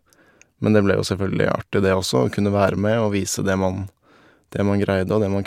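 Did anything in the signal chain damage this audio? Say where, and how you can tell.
No, nothing in the signal chain audibly damaged this speech recording, and no stage from capture through playback has left a mark on the signal.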